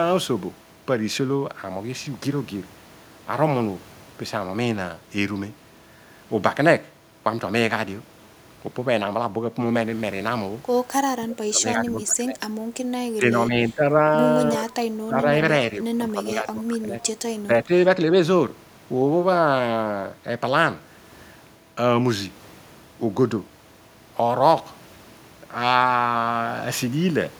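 Speech suppressed in double talk occurs at 11.25–12.39, 13.17–13.82, 14.57–14.65, 15.07–15.25, 16.1–17.02 and 17.42–17.71 s. The speech dips unevenly, from slight to about 20 dB, likely because an echo canceller mistook the talker for loudspeaker echo while the far side spoke.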